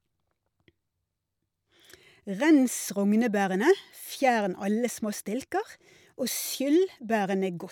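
No technical faults can be heard anywhere in the speech recording. Nothing in the signal chain draws attention to itself at any point.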